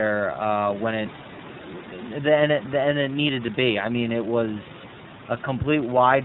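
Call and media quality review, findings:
iLBC codec damage across the whole speech clip. Band capped at 4 kHz, so it sounds dull and narrowband, with a rough, slightly synthetic quality. Each chunk's excitation is coded on its own, which fits 30 ms frames at about 13 kbps. Faint room noise sits about 20 dB under the speech.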